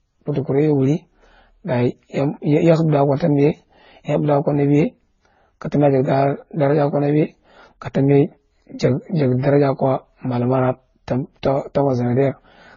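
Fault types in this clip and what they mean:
Transcoding between lossy codecs: the speech carries layered coding damage, with the artefacts of each codec heard together. The content stops dead at 7 kHz. On a spectrogram, a flat ceiling at 7 kHz sits over patchy, blocky mid-band detail. This likely comes from successive low-bitrate passes, which fits AAC, then Vorbis, then a final MP3 encode.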